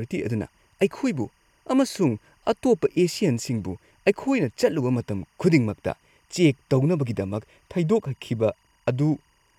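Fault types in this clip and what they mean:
Timecode bleed: Linear timecode at 24 frames per second leaks into the speech, a faint chirping warble near 1 and 2 kHz, roughly 45 dB down, throughout.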